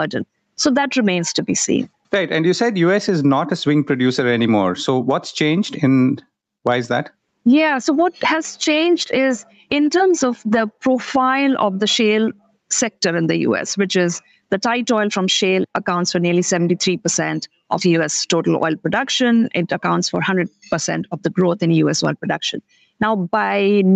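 Throughout, the gain swings by around 15 dB. This is gain pumping, likely from excessive input gain driving a fast limiter.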